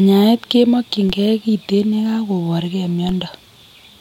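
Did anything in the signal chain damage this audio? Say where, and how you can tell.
Yes. Two low thumps at 1.10 s and 3.09 s sit under unchanged speech: a DC step at the converter or input stage. Each time, the waveform's zero line jumps by about -15 dBFS, then drains away through a 20 Hz high-pass, producing a brief thud.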